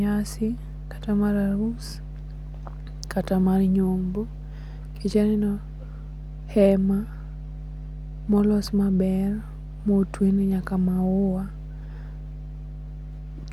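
A ground loop or nearby transformer is coupling the 50 Hz power line into the signal, so mains hum runs under the whole speech recording, roughly 15 dB below it.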